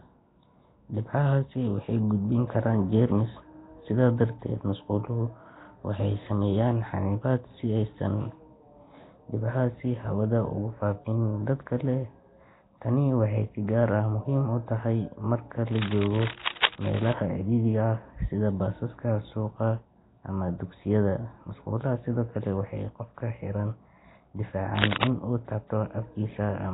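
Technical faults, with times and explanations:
Throughout: Nellymoser compression, likely from a Nellymoser Asao encoder at a rate pointing to about 16 kbps. Fixed low bit allocation across short blocks starves weaker bands, which get noise fill, and nothing survives above 3.8 kHz, so the speech sounds rough, hissy and smeared, with an underwater, heavily damaged character.
15.69 to 17.13 s and 24.77 to 25.07 s: cable scratch noise, likely a worn cable, connector or control being disturbed so its contact resistance jumps about. Dense, irregular noise bursts scratch over the speech, the first at about the same level as the speech, the second about 5 dB above it.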